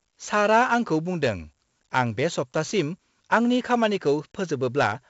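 4-bit ADPCM compression runs through the whole speech clip: each sample is coded as a coarse step from a prediction, leaving level-following gritty hiss and smeared attacks, heavy here, with nothing above 7.7 kHz, which fits a 64 kbps stream at a 16 kHz rate.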